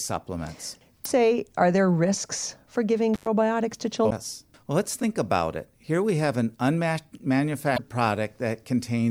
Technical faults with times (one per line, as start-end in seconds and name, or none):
1.02-1.07 damaged data in a compressed stream
3.14-3.27 intermittent contact
4.07-4.12 damaged data in a compressed stream
7.74-7.79 damaged data in a compressed stream